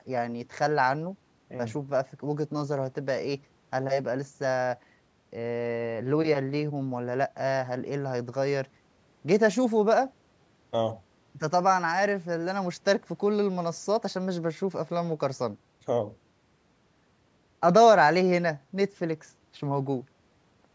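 No technical faults are audible.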